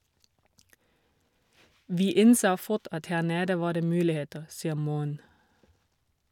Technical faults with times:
none

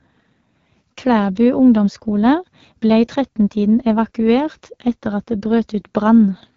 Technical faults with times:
0.00-6.56 AMR wideband (HD Voice) codec

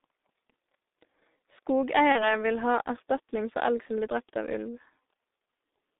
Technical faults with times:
0.00-5.99 G.723.1 codec
2.12-2.38 VoIP packet loss concealed by the speech codec

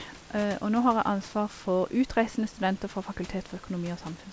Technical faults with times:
none

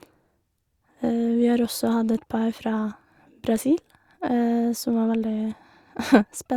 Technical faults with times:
none

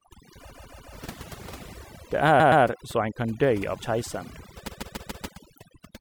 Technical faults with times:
0.00-6.00 overdone noise removal
0.49-0.93 repeated frames
2.39-2.63 repeated frames
4.67-5.25 repeated frames

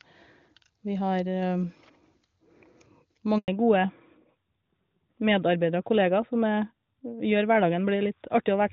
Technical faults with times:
3.38-3.48 handover gap
3.48-8.73 fallback to narrowband

